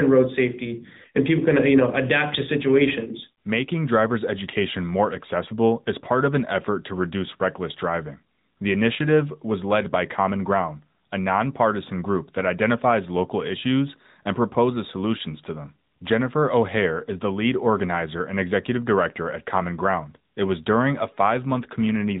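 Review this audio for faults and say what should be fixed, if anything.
AMR narrowband mobile codec damage, throughout: speech band-limited at 3.8 kHz, with plainly audible buzzy, synthetic pulse-driven vocal-tract coding, which fits a 10.2 kbps mode. Prevent it by recording or routing the speech through a wideband path rather than a narrowband mobile call leg.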